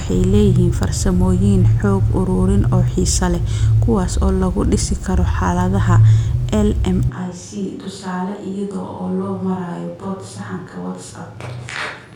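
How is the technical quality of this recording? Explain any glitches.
The recording has one clear fault: a switch to a distant microphone at 7.09 s that lasts to the end. From that point the speech abruptly turns roomy and hollow, loses its low end, and drops by about 10 dB. The room's background noise comes up to around 35 dB below the speech. The cause is likely that the close microphone's feed failed or dropped out, leaving a microphone further from the talker to carry the sound. That microphone picks up more room reflections and ambience, and less of the direct, bass-rich sound.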